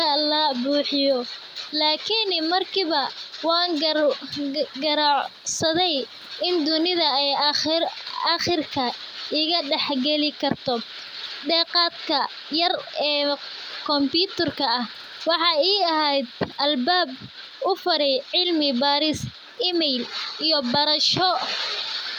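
Nothing stood out on listening to this speech; the faint room background, about 43 dB below the talker, belongs to the recording itself.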